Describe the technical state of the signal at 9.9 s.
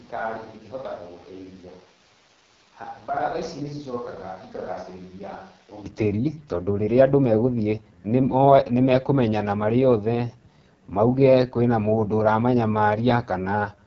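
AMR wideband (HD Voice) codec damage is present at 9.9 s and runs through the whole clip. Speech is rebuilt from a pulse-driven vocal tract model, with noise filling the top band and nothing above 7.5 kHz. The heavy rough, raspy texture fits the codec's lowest 6.6 kbit/s mode.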